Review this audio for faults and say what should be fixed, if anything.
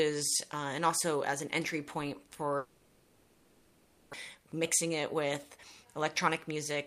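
A long network dropout runs from 2.57 to 4.15 s. The last sound is stretched into a fading buzz for about 1.56 s, with no true silence. About 1 s of audio never returns. The likely cause is a stalled stream. Stronger network redundancy or retransmission would help.

A jitter buffer speed-up follows from 4.35 to 6.77 s. The backlog is drained by cutting short pitch-period pieces again and again. Playback runs about 107% fast at unchanged pitch and sounds hurried. Roughly a fifth of a second is removed. A gentler catch-up rate would prevent it.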